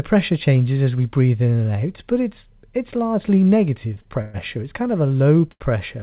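Short stalls from a late packet occur at 3.94–3.98 s, 4.02–4.08 s and 5.51–5.62 s. Each time a packet arrived late, and the receiver held the last sound for 20 ms, 35 ms and then 88 ms before resuming at the same point. Unlike a freeze, these are brief held sounds with a faint buzz or dip, and no audio is lost.

Between 4.22 and 4.36 s a call audio freeze stretches the speech into a fading buzz or hiss lasting 122 ms without dropping to silence. It was likely caused by packets held up long enough to drain the jitter buffer. It is longer and more clearly decaying than the stalls.

Throughout, the speech has nothing above 4 kHz, which fits a G.711 mu-law call path.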